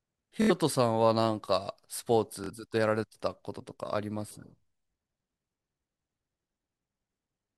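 At 0.42 to 0.51 s and again at 2.44 to 2.51 s, Bluetooth stutter: late packets make the receiver loop its last short slice, a brief buzzing repeat, then the speech skips ahead by about 70 and 46 ms. A spectrogram shows evenly repeated vertical bands, and the waveform shows identical copied segments.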